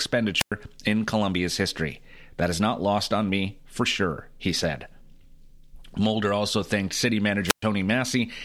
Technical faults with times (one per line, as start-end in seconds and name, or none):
0.37-0.52 wireless microphone squelch dropout
7.45-7.64 wireless microphone squelch dropout